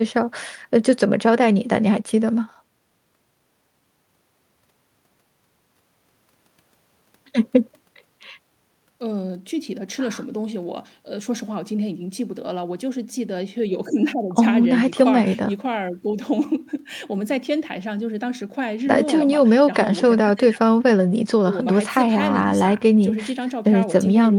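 Speech recording with no technical faults to report.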